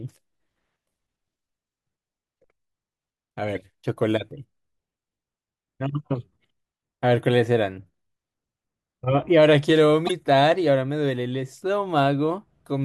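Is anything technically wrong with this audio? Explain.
Yes. Two corrupt frames decoded appear in this speech, at 3.55–3.57 s and 10.07–10.11 s, each spanning a couple of frames. Flipped bits made the decoder place energy at wrong frequencies, heard as brief chirps, squeaks, blips or noise bursts peaking near -20 and -10 dBFS.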